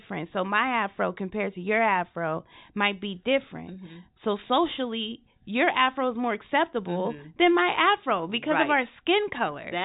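No faults are audible in the speech; the band stops at about 3.8 kHz, which is simply G.711 telephone coding working as designed.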